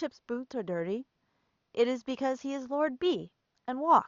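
Speech recording with no technical faults; the room's background noise sits about 51 dB below the speech.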